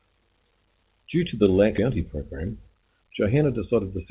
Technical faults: skip ahead; jitter buffer speed-up

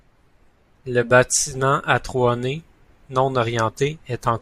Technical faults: none

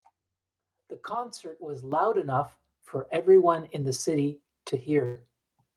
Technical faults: microphone volume stepped up; burst of packet loss

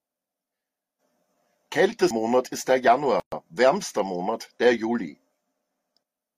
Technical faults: CD skip; gap at a join of encoded pieces

